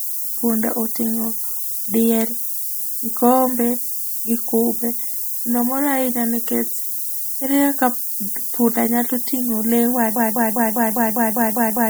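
From start to finish the speech has been reduced to very coarse amplitude steps, with the rounding error pushed upward in frequency by noise shaping. This low bit depth with noise shaping points to roughly 5-bit quantisation. It is heard as a steady, thin hiss that climbs steeply toward the top of the band and sits only a few decibels below the speech, so it stays prominent even during loud passages.

At 10.16 s the playback or stream likely stalled and kept resending the last fragment it held, producing a broken-record loop. A 0.2 s slice of speech repeats exactly, back to back, nine times, giving a rapid stuttering pulse at about five repeats per second that continues to the end of the clip. Whatever should have been heard in those last seconds is missing.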